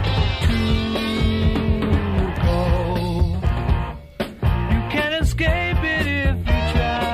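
No dropouts, clicks, distortion or level jumps are audible anywhere in the clip.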